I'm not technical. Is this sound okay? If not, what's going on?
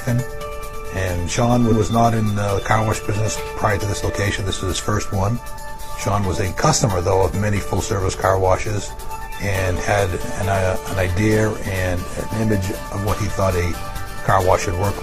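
No. Around 1.68 to 1.77 s there are repeated frames: a roughly 93 ms chunk of sound plays twice, giving a quick stutter and stretching the clip by that much.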